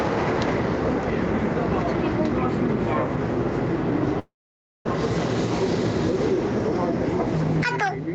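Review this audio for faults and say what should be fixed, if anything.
Gain pumping runs through the whole clip. The input gain is likely set far too high, so a fast limiter or compressor keeps clamping down whenever a loud sound arrives and releases in the quieter gaps. The level swings by about 5 dB. Loud and soft parts sit unnaturally close together, and the sound comes across squashed. To prevent it, lower the microphone or interface gain so the limiter is no longer working constantly.

A long network dropout occurs from 4.19 to 4.87 s, likely caused by packets failing to arrive over the call connection. For about 0.66 s nothing real is played. The receiver first stretches the last sound into a brief fading buzz or hiss for roughly a tenth of a second. Then about 0.56 s of silence follows before the audio resumes, and the portion in that gap is simply gone. To prevent it, use a more stable network path, such as wired instead of Wi-Fi, or reduce competing traffic.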